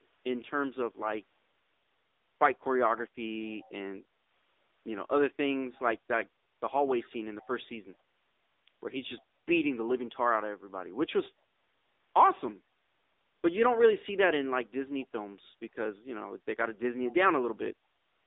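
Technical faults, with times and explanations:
Throughout: AMR narrowband mobile codec. The speech sits in a narrow telephone band of roughly 300 Hz to 3.7 kHz, with nothing above 3.8 kHz. The coder rebuilds each 20 ms frame from a vocal-tract model excited by a sparse set of pulses. The codec damage is plainly audible as a buzzy, synthetic edge on voiced sounds, which fits one of the lower AMR-NB modes, around 8 kbps.
0.02–0.06 s, 3.45–3.70 s, 7.03–7.09 s, 7.41–7.45 s, 7.73–7.78 s: echo leak. Brief, faint scraps of the speech return 211 ms after the original, very low at some 30 to 40 dB beneath it, and loudest in the cluster after 7 s. They are likely residue from a loudspeaker-side echo canceller that did not fully suppress its microphone pickup. The short fragments are what slipped past its suppression.
4.08–4.30 s: background gated by the echo canceller. The room sound dips by about 7 dB for around 200 ms and then recovers. 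The canceller pulled the microphone gain down while it judged the loudspeaker active. When it released, the ambience came back, so the background briefly dips and then returns to its previous level.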